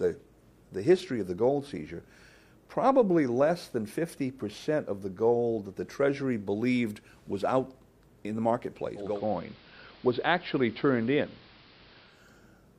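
From 8.95 s to 12.28 s the sound turns dull, drops about 1 dB and gains a steady hiss roughly 25 dB down. It is digital radio blending to analogue: the receiver lost the digital stream and cross-faded over 294 ms to the station's AM broadcast.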